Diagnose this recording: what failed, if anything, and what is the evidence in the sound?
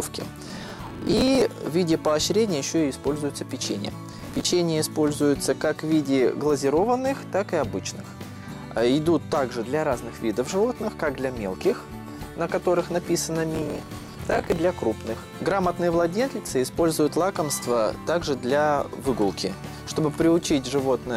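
Processor overload crackle at the driver or buffer stage: gritty tearing bursts at 0.49–1.42 s, 4.12–4.45 s and 13.55–14.57 s. Dozens of roughly 10 ms buffers missed their deadlines and replayed stale audio with hard edges. The regular buffer-sized grain and clean stop rule out a loose cable.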